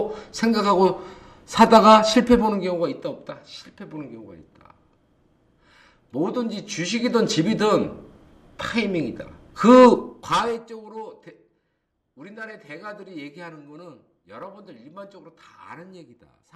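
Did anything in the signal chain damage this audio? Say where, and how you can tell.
Yes. Sample clock jitter at the converter runs through the whole clip: a fine hiss and roughness that rides on the sound itself, thickening on loud and bright passages and disappearing in silences. Unlike a fixed noise floor, it follows the level, sinking along with the signal. That fits an unstable sampling clock wandering by a couple of microseconds, with timing errors that scale with waveform slope and sit roughly 40 dB below the signal.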